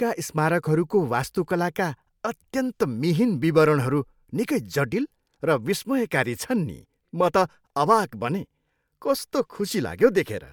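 No technical faults can be heard anywhere in the speech recording; the signal holds steady throughout without any disruption.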